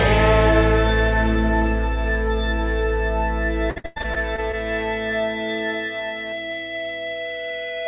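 From 3.7 to 4.55 s the music breaks up with repeated packet loss (robotic sound): eight gaps, the longest 100 ms, with 309 ms patched by extending the preceding audio. That concealed fill covers 36% of the stretch and sounds choppy, with pieces missing. The band-limited call path, with nothing above 4 kHz, fits a 64 kbps G.711 link.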